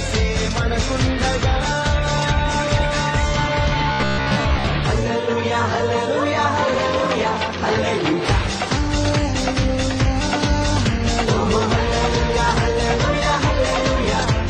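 From 3.92 to 4.67 s the audio turns into a robotic sound from repeated short buffers, a rigid metallic buzz at 66.7 Hz. That's likely starved playback re-looping a roughly 15 ms chunk, with most of the real audio skipped during that stretch.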